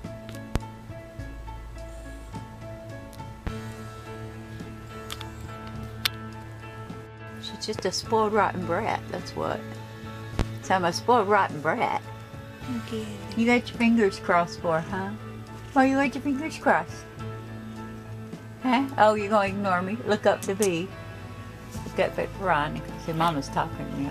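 Four loud pops break into the sound, at 0.56–0.59, 3.47–3.50, 7.79–7.82 and 10.39–10.43 s. Each is a single sharp thump about 30 ms long, jumping some 15 to 20 dB above the signal, which continues underneath. A likely cause is electrical transients from a switch, plug or static discharge.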